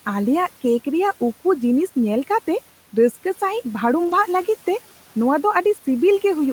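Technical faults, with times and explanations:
4.03–4.13 s, lost packet rebuilt from error correction: the speech does not drop out, but about 60 ms of it turns rougher and noisier, a brief grainy patch heard above the room noise, which sits about 22 dB below the speech. The sound points to three lost packets. Each following packet carried a low-bitrate backup copy of the missing one, and the decoder played those cruder copies in their place, so the gap is filled with degraded audio rather than silence.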